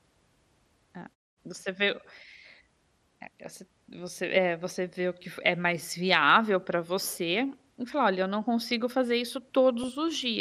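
This speech clip sounds dull throughout, with a gurgling, granular texture. Upper bands flicker out. It is likely MP2 compression, at a bitrate around 80 kbps.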